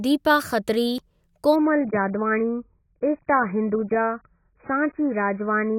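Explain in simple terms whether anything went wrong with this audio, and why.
Two things go wrong here, one quick and one lasting.

At about 0.98 s the speech jumps forward slightly, as if a tiny sliver of sound, roughly one and a half hundredths of a second, had been snipped out and the two ends pushed together. There's no pause, just a skip. That's most likely a dropped buffer (overrun): the recording software didn't pick up a chunk of audio in time, the hardware wrote over it, and that piece was lost.

From about 1.56 s to the end, the voice suddenly sounds duller and a bit smeared, like a poor phone line. That's the adaptive stream switching to a lower bitrate, probably because the connection slowed down. To save data it sent a much smaller version of the audio, which throws away everything above about 2.5 kHz. That loses the crisp edges of consonants and adds a watery, artificial quality. 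The drop happens abruptly, with no gap in the sound.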